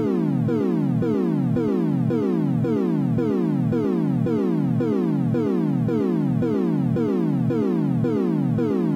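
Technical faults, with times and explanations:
Throughout, doubled audio track: a dry copy trails roughly 100 ms behind, about 5 dB down, likely captured a second time through a slower path.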